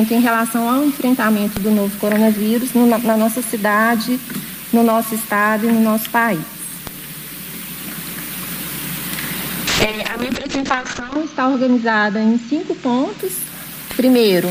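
From 9.68 s to 13.25 s a call bitrate drop occurs: the encoder is starved of bits, which fits a fall from about 48 kbps to 6 kbps. High frequencies above 8 kHz disappear, and the audio sounds coarse, watery and muffled, at its worst for roughly 1.5 s, before recovering.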